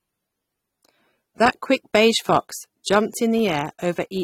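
Throughout the speech, AAC compression damage is plainly audible: nothing survives above about 16.6 kHz, and sibilants and sustained sounds take on a smeared, warbling texture. The likely cause is AAC-LC coding at a low bitrate, which fits roughly 32 kbps.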